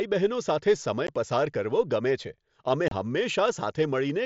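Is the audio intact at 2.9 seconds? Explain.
No. The speech has a gap from 2.88 to 2.92 s, just after "છે અમે". This is unconcealed Bluetooth headset packet loss. Voice packets travelling between headset and phone went missing, and nothing was rebuilt to cover them. Silence took their place for about 30 ms, which fits roughly four lost packets on this mSBC link. The result is a brief hole in the speech with abrupt edges on both sides.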